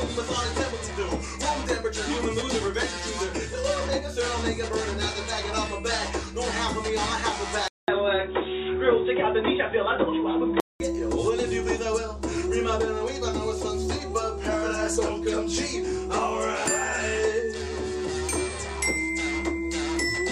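At 7.68 s the input likely switched to a poorer device: after a 200 ms gap, the sound turns dull, with nothing above 3.8 kHz, until 10.8 s.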